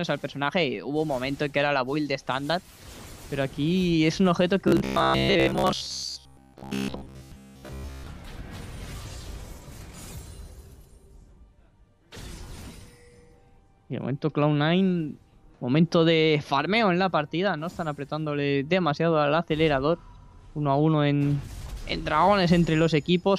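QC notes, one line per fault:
4.68–8.07 s, robotic sound from repeated short buffers: new audio likely arrived too seldom, so playback kept looping the last slice of about 15 ms in place of most of the real audio, stamping a rigid metallic buzz at 66.7 Hz that follows the sound only loosely.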